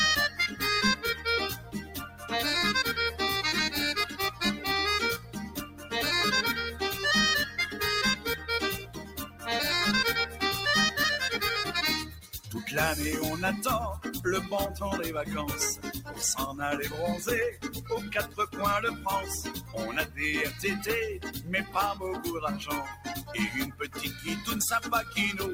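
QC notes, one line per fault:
Throughout: noise suppressor applied to music or sounds. A suppressor tuned for speech stays active across the clip. It treats steady tones, ambience and reverb as noise and turns them down, so the level swings by roughly 10 dB. Attacks pass through. Sustains and tails sink, so the sound pumps and thins.
0.29–10.41 s, 12.03–12.53 s, 15.75–16.20 s, 17.51–25.16 s: sound cut by the noise suppressor. Here the suppressor judged the material to be noise and pulled it down harder. The drops reach about 12 dB in the first and last spans, about 10 dB at 12.03 s and about 9 dB at 15.75 s. Around 3 s in total is hit in each long span. Held and decaying sound fades early, while sudden onsets survive.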